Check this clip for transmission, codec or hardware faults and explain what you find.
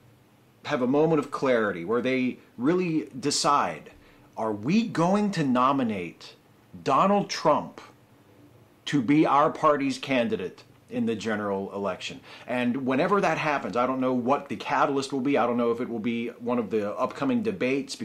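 One transmission fault is audible. Lost LE Audio frames at 10.95 s: for about 10 ms, consistent with a single dropped frame, the LC3 decoder filled the gap by repeating the previous spectrum with randomised signs, so the sound briefly blurs into a short noisy smear.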